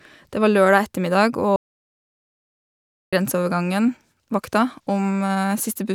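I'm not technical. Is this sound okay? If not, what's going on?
No, there's a gap in it. From about 1.56 to 3.13 seconds the speech cuts out completely, and that's an audio dropout to silence. For roughly a second and a half there's nothing at all, not even the faint background hum of the room, and then the speech picks up again mid-flow. That points to the microphone or its connection likely dropping out while the recording kept running, so whatever was said in that stretch is simply gone.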